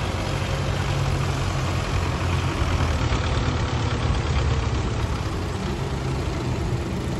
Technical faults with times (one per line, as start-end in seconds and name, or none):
3.00-5.00 adaptive stream at a lower bitrate